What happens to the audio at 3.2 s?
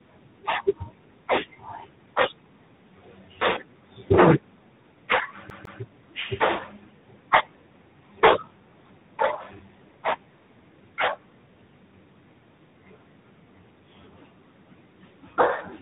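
At 3.2 s the speech carries tandem speech coding, present throughout the clip. It passed through AMR-NB, CVSD and G.726 coders in turn, each re-coding the last one's damage, so it sounds rough, muffled and warbly. Unlike a plain band limit, which dulls without warbling, it stacks coding artefacts, with nothing above 3.8 kHz.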